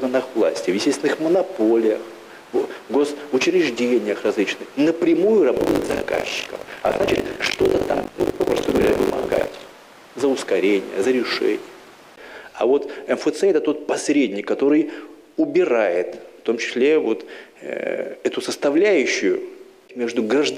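From 5.56 to 9.73 s, ring-buffer writer and reader slip, causing buffer tearing: every period splices in stale audio between hard joins, heard as a robotic 50 Hz buzz.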